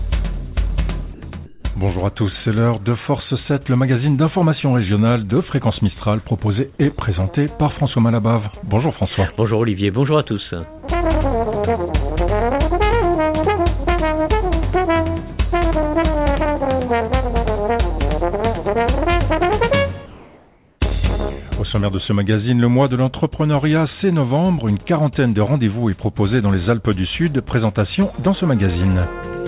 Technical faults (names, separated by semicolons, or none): comfort noise in place of the background